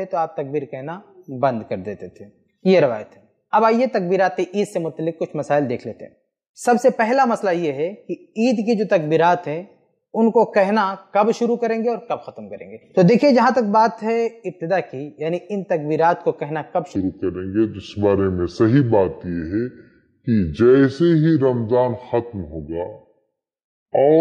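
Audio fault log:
16.96 to 24.20 s, section at the wrong speed: from here to the end the audio runs at 0.669 times its recorded rate, likely from a clock mismatch during playback or editing. Pitch drops about seven semitones and timing slows with it, unlike a pitch shift, which keeps tempo.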